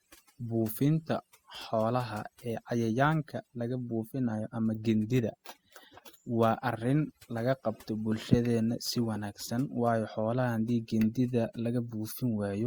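From start to finish there's overdone noise removal. The noise reducer was pushed too hard, so bands near its noise estimate get pulled right down along with the softer parts of the speech. The gaps go almost silent with little twinkling specks.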